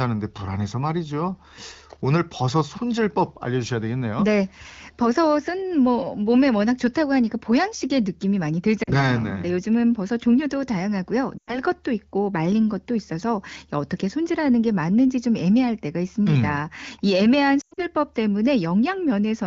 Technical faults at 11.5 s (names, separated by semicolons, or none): lost AMR speech frames